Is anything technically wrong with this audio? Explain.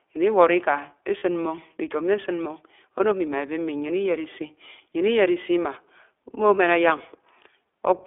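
Yes. The speech has gone through the iLBC codec over a telephone-band line, and two short packet losses occurred. The line passes only about 300 Hz to 3.5 kHz, and iLBC rebuilds each frame's excitation independently at a low bitrate, consistent with the 15.2 kbps mode and 20 ms frames. The codec damage is plainly audible throughout: the voice sounds narrow and muffled, with a slightly rough, synthetic texture instead of natural breathiness.

Lost iLBC frames occur at 1.18 to 1.23 s (40 ms) and at 2.98 to 3.01 s (20 ms), just before "ami ma ebe". When packets went missing, the decoder filled the gap by repeating the last pitch cycle blended with noise. Each dropout therefore sounds like a brief held, faintly buzzy vowel rather than silence. Because iLBC frames stand alone, the voice returns cleanly right after each gap.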